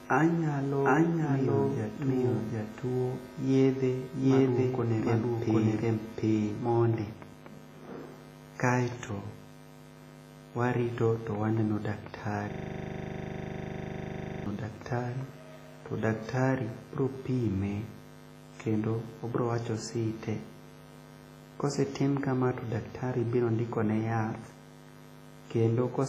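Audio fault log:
Throughout: WMA compression. The whole thing has a ringing, washy quality, with a hiss that swells and drops along with the speech. The damage is heavy, and nothing sits above 15.3 kHz. That fits a transform codec at a low rate, likely WMA at around 24 kbps, with its quantisation noise smeared over long blocks.
0.00–6.78 s: doubled audio track. It's already going when the clip starts: a second, full-band copy trails the original by roughly 0.7 s, at about the same level. There's no decay or room colour on it, so it likely comes from the audio being captured twice or an edit holding two offset copies.
12.51–14.46 s: system hang loop. A single 40 ms slice of audio repeats exactly, about fifty times at a 25 Hz rate, before the clip resumes on "daktari to daktari biro". The machine stalled while the sound hardware kept cycling the same buffer.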